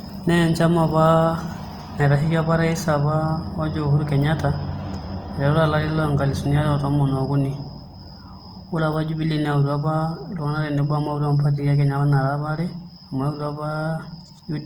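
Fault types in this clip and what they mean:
Opus compression: the speech sounds grainy and rough all the way through, fine detail swapped for noise, likely Opus music mode around 24 kbps, still reaching 20.2 kHz.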